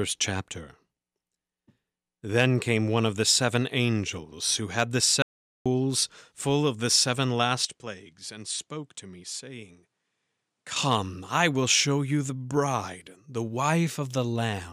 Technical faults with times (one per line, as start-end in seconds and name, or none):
5.22-5.66 audio dropout to silence
7.65-10.76 input switched to a poorer device